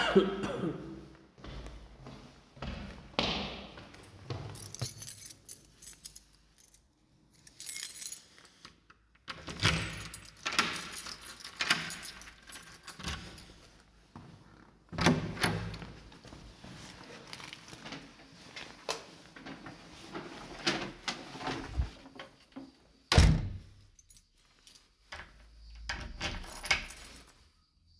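Nothing stood out on listening to these sounds.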